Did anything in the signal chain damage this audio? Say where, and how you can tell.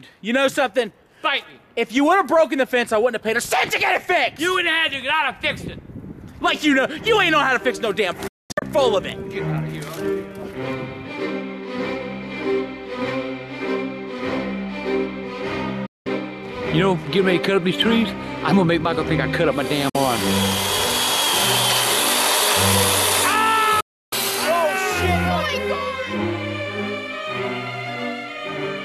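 Yes. The damage happened at reception. This is a digital broadcast dropout: the receiver either lost the digital signal or rejected frames that failed their checksum, and it muted until good frames returned. Each time, the sound fades to silence within about 8 ms and comes back with material missing. This happens at 8.27–8.63 s (several short holes totalling 0.29 s, the longest 0.22 s), 15.86–16.07 s, 19.89–19.95 s and 23.80–24.13 s. The gap lengths come in multiples of 24 ms, which fits whole codec frames being discarded.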